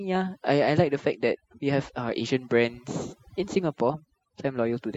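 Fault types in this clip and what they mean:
overdone noise removal: denoiser pushed way too hard, so gaps in the speech drop to near silence with twinkly specks.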